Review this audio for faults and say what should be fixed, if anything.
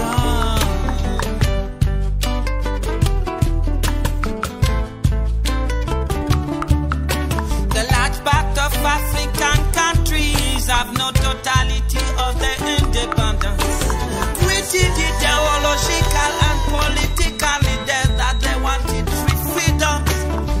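A feedback whistle sits behind the sound from 15.11 to 18.52 s: a thin, steady tone at 3.8 kHz, roughly 20 dB below the signal, swelling and fading slowly in level. On a spectrogram it shows as a single narrow horizontal line; the waveform barely changes. The likely cause is a loudspeaker-to-microphone loop held just at the edge of feedback, ringing at one frequency without building up. To prevent it, lower monitor gain, increase loudspeaker-microphone separation, or notch 3.8 kHz.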